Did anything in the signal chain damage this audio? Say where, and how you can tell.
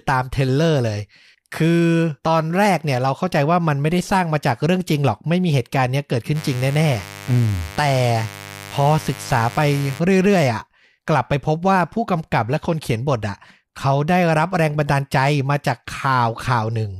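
Yes, there's mains buzz in the analogue wiring from 6.33 to 10.02 s: a steady, raspy 50 Hz buzz sitting roughly 15 dB below the speech. Something like a dimmer or a broken shield is injecting spiky pulses twice per mains cycle, so the harmonics reach well into the kHz range.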